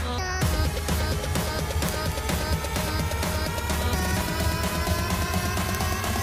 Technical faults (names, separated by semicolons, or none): word clock ticks